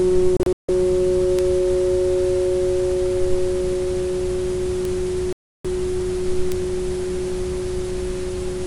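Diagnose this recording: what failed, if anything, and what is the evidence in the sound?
The broadcast receiver lost lock or rejected corrupted frames twice and muted its output, a digital broadcast dropout at the reception and decoding stage. From 0.37 to 0.69 s the sound breaks into several short holes, with the longest gap about 160 ms and roughly 224 ms missing across that 320 ms stretch. From 5.33 to 5.65 s it goes silent for one solid 320 ms block. The pattern points to a run of failed frames. The audio carried during those gaps is gone.

A single-bit error in memory or on a digital link produced a bit error spike, where one sample value jumps by a power of two and immediately snaps back. Each one is heard as an isolated, broadband tick with no relation to the surrounding everyday sound, at 1.39 s, 4.85 s and 6.52 s. The ticks are far too short to be dropouts, and each sounds like a corruption of only one to three consecutive samples.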